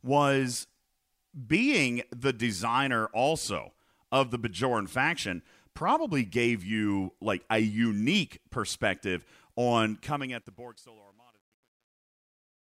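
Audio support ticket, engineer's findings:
Truncation distortion on a fade, 10.0–12.68 s, worst from 10.6 s to the end. Tail of the speech turns gritty. Probable component: fade or gain stage truncating without dither, which fits about 10-bit resolution, so low-level waveform collapses into coarse square steps. The fade-out itself starts around 10 s and ends at 12.7 s.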